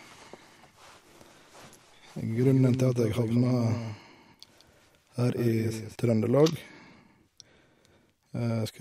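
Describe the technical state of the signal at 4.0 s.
At 4.0 s the speech carries a distinct second copy of itself trailing about a fifth of a second behind, noticeably quieter, roughly 10 dB down, full-band, with no decay or room colour, so it reads as a flat slapback rather than an echo. This doubled audio track runs from 2.35 s to 5.95 s, switching in and out abruptly at those points. It is likely caused by the signal being captured twice through a slower second path, or by an edit leaving two out-of-step copies mixed together.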